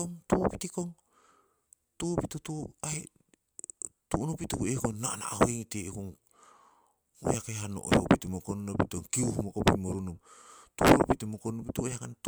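No technical faults can be heard anywhere in the speech recording; the signal stays steady and intact throughout.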